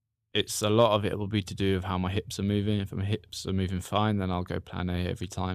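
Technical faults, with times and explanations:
No technical faults can be heard in this speech recording.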